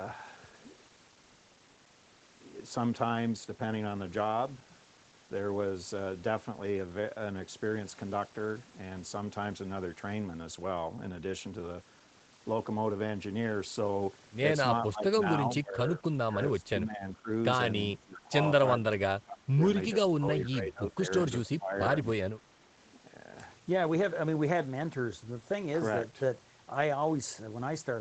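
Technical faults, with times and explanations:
14.90–15.16, 15.56–17.29, 17.96–18.33, 18.76–19.62, 19.94–21.09 and 21.42–21.76 s, speech suppressed in double talk: the speech keeps ducking by about 15 to 25 dB, in chunks, as if gated. That's likely an echo canceller, faced with both ends talking at once, clamping down on the near talker too.
22.84–22.90 s, echo leak: a brief, very faint scrap of the speech comes back about 386 ms late, roughly 40 dB down. Probably the far end's loudspeaker echo slipping past its canceller and getting sent back.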